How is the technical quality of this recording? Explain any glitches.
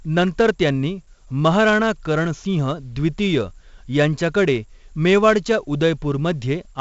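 The quality is poor. The speech carries a gritty hiss that rises and falls with its loudness, with roughness on sharp onsets and nothing above 7.7 kHz. Throughout the clip this is heavy 4-bit ADPCM compression: each sample is coded as a coarse step from a prediction, so the error tracks the signal level and the step lags on fast attacks. The dull top end and rate fit a 64 kbps stream.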